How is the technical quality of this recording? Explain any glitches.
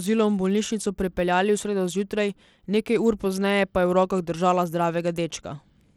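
The quality's noticeably compromised: there's plainly audible codec damage running the whole way through the speech. It sounds like Bluetooth SBC compression is the likely culprit, squeezed hard enough that it points to a low bitrate around 96 kbps. SBC splits the signal into a handful of wide bands and hands out bits without any real hearing model, so at that rate the upper bands get starved. You hear the treble thinning and flickering in and out, with a gritty, aliased edge sitting on the sound from start to finish.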